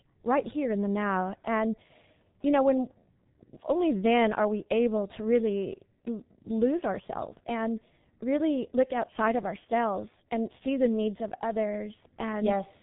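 G.723.1 codec damage runs throughout: nothing passes above 3.8 kHz, and heavy low-rate coding, fitting about 6.3 kbit/s, leaves the speech muffled, hoarse and smeared at consonants.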